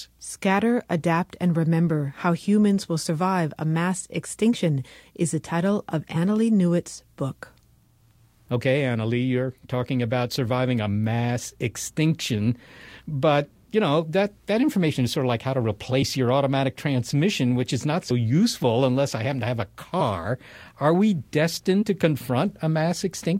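A speech clip with compressed frames skipped: the audio jumps ahead by one to a few frames, roughly 20 to 70 ms, at 6.15 s (after "is the title of"), 16.01 s, 18.10 s (between "transmission which is not" and "useful unless i happen"), 20.00 s (after "happen to have a"), and 21.81–21.83 s.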